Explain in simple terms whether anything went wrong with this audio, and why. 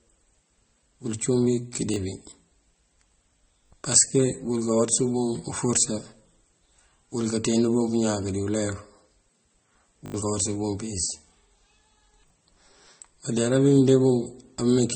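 The audio stutters in four places: right after "wul cúun wí" at 1.94–1.96 s, then at 3.66–3.70 s, 10.06–10.14 s and 12.28–12.30 s. A tiny slice plays again with a hard click-like join. This is a repeated buffer: the player ran out of fresh sound and replayed its last small chunk, which fits a 20 ms buffer, briefly losing some real audio each time.

The whole clip also sounds dull, with nothing above about 8.4 kHz. The likely cause is transcoding between lossy codecs: the audio was squeezed as MP3 and then squeezed again as Vorbis, so both rounds of damage pile up.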